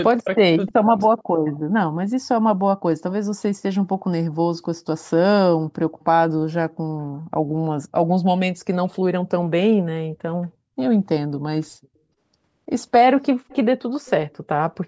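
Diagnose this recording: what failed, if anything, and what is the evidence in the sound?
Call processing is where this fails, in the echo canceller's double-talk handling. From 0.14 to 0.97 s the speech is turned down in pieces totalling about half a second, falling by as much as about 40 dB at its deepest, with a shorter dip at 11.27 to 11.33 s. This is speech suppressed in double talk, likely because the canceller could not separate the local talker from loudspeaker echo and ducked both. A network dropout would leave abrupt gaps or glitches. Here the level is pulled down by gain.

The second fault is an echo leak from the same call-processing stage, heard as faint, discrete repeats of the speech at 0.68, 1.06, 1.48, 6.0 and 13.49 s. Each lags the original by about 0.31 s (308 to 318 ms) and sits roughly 25 to 35 dB below it. Room reverberation would smear into a continuous tail, but these are separate delayed copies at a fixed lag, which points to loudspeaker pickup that the canceller failed to remove. 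Across the clip the band stops at 8 kHz, as the call's normal microphone processing would leave it.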